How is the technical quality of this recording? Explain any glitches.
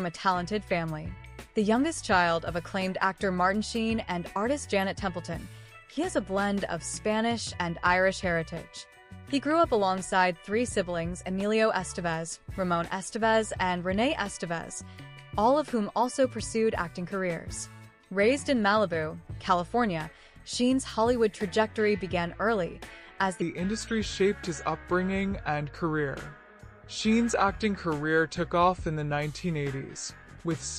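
The recording has one clear glitch near the end. From 23.4 s to the end at 30.8 s, the sound suddenly drops lower and drags, deeper by roughly three semitones and noticeably slower. This is a section at the wrong speed, running at 0.824 times its proper rate. Because pitch and tempo shift together, the likely cause is that this stretch was played back or resampled against the wrong clock rate rather than pitch-shifted on its own.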